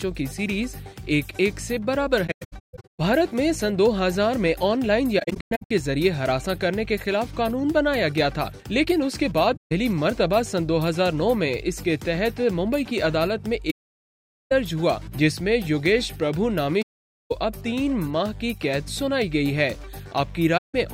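AAC frame loss with muting: coded frames went missing and the decoder zeroed their spectrum, so the overlapping windows fade the sound out and back in around each gap. The holes fall at 2.27 to 2.99 s (scattered dropouts, the longest about 150 ms), 5.19 to 5.71 s (scattered, longest about 100 ms), 9.56 to 9.72 s, 13.70 to 14.52 s, 16.82 to 17.32 s, and 20.57 to 20.75 s. Each is a soft-edged silence.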